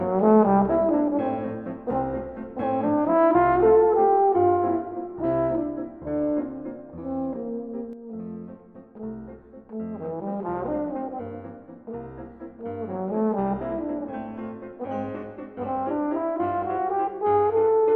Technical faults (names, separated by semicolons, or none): one channel drops out